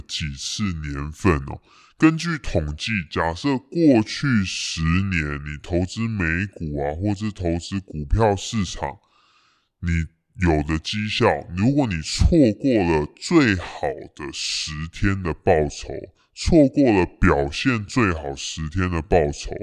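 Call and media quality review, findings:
Wrong sample rate, throughout: speech low and slow, speed 0.726x, pitch down 5.55 semitones, fitting 44.1 kHz material clocked out at 32 kHz. Playback path, no resampling. Speed and pitch drop together, unlike time-stretch or pitch-shift artefacts.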